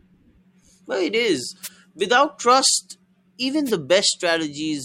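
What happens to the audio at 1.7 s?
A wireless microphone noise hit: reflections cancel the radio signal, so receiver noise bursts out as static from 1.63 to 1.69 s, after "it is".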